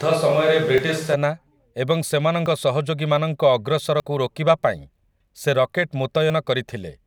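From the very start until about 1.14 s, the speech sounds roomy and hollow with thinner bass, then snaps back to a close, full sound. That points to a likely switch to a distant microphone, with the close one missing. Level barely changes, and room noise sits roughly 25 dB under the speech. Unlike added reverb, the change is abrupt.

At 0.78, 2.46, 4.0 and 6.3 s, the speech makes sudden jumps forward, each skipping a few tens of milliseconds, longest at 2.46 s. These are likely dropped buffers (overrun). No silence marks the gap, which separates them from dropouts.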